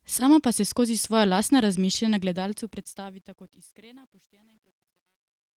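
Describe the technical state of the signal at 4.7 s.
At 4.7 s you're deep in the truncation distortion on the fade-out, which runs from 2.23 s to the end and is worst from about 3.2 s on. The fade stage drops low bits without dither, consistent with roughly 10-bit resolution, so the tail turns gritty.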